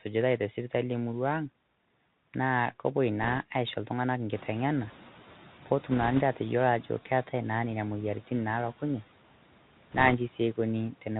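Throughout, the speech carries the sound of the Bluetooth CVSD headset codec. Its one-bit delta modulation, which fits a 64 kbps link, passes nothing above 4 kHz, leaving the voice muffled, with a granular hiss beneath it and scratchy, distorted s sounds where loud high content outruns the adapting step size.

From 3.21 to 3.38 s, bit errors on the Bluetooth voice link, at a rate on the order of one or two percent, add a brief rushing crackle. Because each bit moves the waveform only slightly and the error fades, there are no sharp clicks.

Room noise steps up by about 14 dB at roughly 4.5 s. From 4.31 to 6.81 s the noise suppressor is catching up. Its noise estimate lags the rise, so the louder background comes through with little reduction at first. It then sinks by about 6 dB as the estimate adapts over 2.5 s.

Within that stretch, from 5.92 to 6.21 s, a second burst of bit errors, somewhat denser at around two percent, brings a stronger crackly rush over the speech. 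The last burst, from 9.91 to 10.15 s, again at roughly one to two percent, produces the same short crackly, rushing noise.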